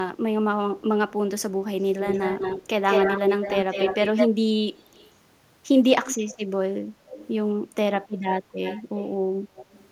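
Echo leak recurs at 1.79–2.67, 2.87–4.29, 4.78–5.12, 6.04–6.38, 7.08–7.28, 8.09–8.33, 8.62–9.04 and 9.55–9.89 s, likely from a far-end loudspeaker whose echo canceller let its microphone pickup through. A copy of the speech trails by 190 ms through the first four, then 298 ms. It is nearly as loud as the speech around 3 s and faint near 5 s. A spectrogram shows each syllable's harmonics repeated, shifted right, and a waveform shows doubled envelopes.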